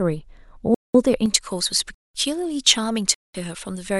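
Hard-edged holes of silence, each 200 ms long, cut into the speech at 0.74 to 0.94 s, 1.94 to 2.14 s and 3.14 to 3.34 s, recurring every 1.2 seconds. This is a gap between chunks: the audio was split into one-second blocks, and each join left a fixed silence instead of running straight on. Nothing appears to be missing from the speech; it simply stops abruptly and resumes.

From 1.26 s to the end, the speech turns thin, bright and hissy, with sibilants pushed forward. This is pre-emphasis left on: a treble boost consistent with the J.17 curve was applied but never undone by the matching de-emphasis, leaving about 11 dB more level at 10 kHz relative to 1 kHz. The two later gaps fall within this overly bright stretch.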